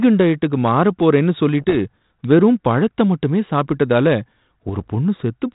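From 1.61 to 1.77 s and again from 4.68 to 4.87 s, the speech carries bit errors on an ADPCM link, heard as pops and rough, gritty bursts with brief level jumps. A fraction of a percent of bits flip, and each one knocks the decoder's step size and predictor off track, so the damage rings on for some milliseconds. The surrounding band-limited, lightly hissy character points to a 32 kbit/s G.726 link.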